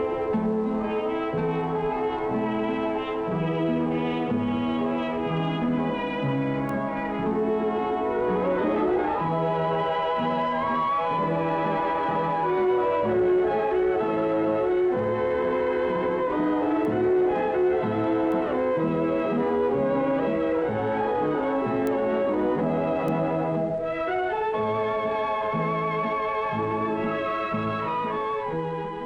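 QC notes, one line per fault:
6.69, 16.85, 18.32, 21.87 and 23.08 s: bit error spike. A flipped bit throws one sample off by a power of two, giving a sharp broadband tick, about -23 to -11 dBFS, loudest at 21.87 s.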